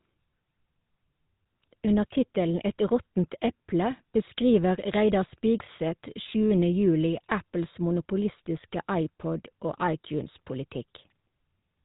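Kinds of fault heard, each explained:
GSM full-rate codec: Present through the whole speech clip, this early mobile-phone codec reduces the signal to a vocal-tract filter excited by a sparse, regularly spaced pulse train, discarding two of every three excitation samples. The result is plainly audible damage: a buzzy, gravelly roughness over the speech and nothing above 4 kHz, which leaves it dull and narrowband. The character fits coding at around 13 kbps in the original GSM full-rate scheme.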